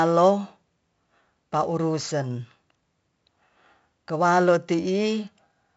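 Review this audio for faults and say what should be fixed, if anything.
4-bit ADPCM compression runs through the whole speech clip, heavily: a gritty hiss rides every loud syllable and attacks break up where the coarse step size cannot adapt fast enough. Unlike steady tape or mic hiss, this noise follows the signal level and drops away in pauses. Nothing reaches above 7.7 kHz, which fits a low sample rate and a 64 kbps stream. Re-export from the original source using PCM or a modern codec at a higher sample rate.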